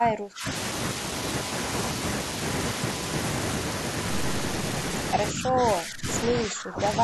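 From 0.0 to 0.47 s the speech sinks by as much as 30 dB, then dips again from 5.32 to 6.07 s by around 15 dB and from 6.25 s to the end by around 20 dB. This is speech suppressed in double talk, likely caused by an echo canceller that mistook the near talker for loudspeaker echo while both sides spoke, and attenuated everything.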